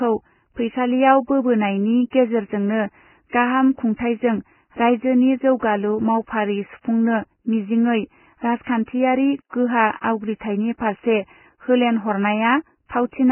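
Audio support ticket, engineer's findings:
Whole clip: dull, hissy speech with nothing above 3 kHz, gritty grain on vowels, smeared consonant onsets. Likely Vorbis compression pushed to a very low bitrate, heavy damage. The encoder drops the top band and quantises what's left so coarsely that fine detail turns into noise of similar energy, hence the grit. Try re-encoding at a higher quality setting.

2.10–2.13 s, between "फैसालियाव बोबोनायनि" and "गेजेरेजोंनो गाहाम": pre-echo, a short smear of hiss about 27 ms long before a sharp onset, attack softened. Same transform codec at work: a hard attack near the end of a block, so the quantisation noise sized for the loud part also fills the quiet gap just ahead of it.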